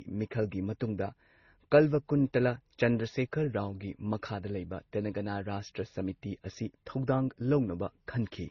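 Speech, with a transcoding fault between lossy codecs throughout. Nothing is heard above about 6.8 kHz, so the top end is dull and the sibilants are blunted. Two kinds of damage sit together. There are the artefacts of a low-rate MP3-style encode, and over them the separate artefacts of a second codec. The likely cause is a second lossy encode, which fits a roughly 32 kbit/s Opus pass, spending its bits on the first codec's artefacts while keeping that low cut-off.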